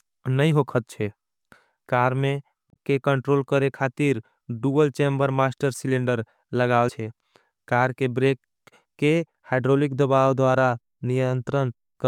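A speech clip with damaged data in a compressed stream. Two brief glitches break the sound, at 2.70 to 2.76 s and at 6.85 to 6.90 s. Corrupted bytes made the decoder misread frames and lose sync.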